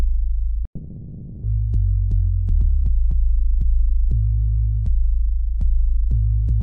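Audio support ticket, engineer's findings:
Long network dropout, 0.65–1.45 s: fading buzz, then brief silence, resuming with audio skipped, not delayed. Likely receiver concealment filling lost packets.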